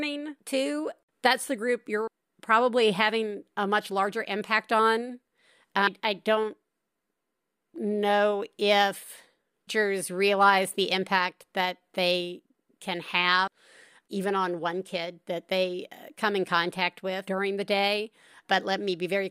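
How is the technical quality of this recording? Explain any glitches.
The recording has one recurring glitch: audio missing between chunks. Skips occur at 2.07, 5.87, 9.67, 13.47 and 17.27 s, with the third falling between "know if" and "realize the impact that". Each time, roughly a fifth of a second of speech vanishes. The two sides butt together with no gap, so the sound jumps forward abruptly. The steady spacing likely points to a recorder working in 4-second chunks and dropping audio at each changeover.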